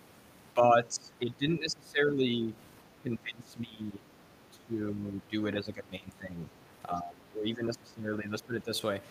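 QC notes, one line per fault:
0.54–2.55, 2.96–4.07, 4.5–5.35, 5.53–6.4 and 6.88–8.72 s: speech suppressed in double talk. The talker keeps sinking, about 20 dB down at worst in the first, second and last stretches and about 15 dB in the middle two. That is likely the echo canceller hearing both sides at once, mistaking the talker for echo, and pulling everything down.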